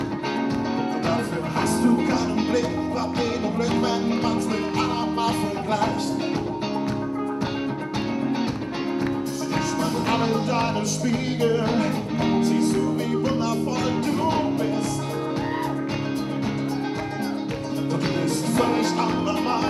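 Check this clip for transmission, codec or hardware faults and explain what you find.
Nothing stood out on listening to this clip.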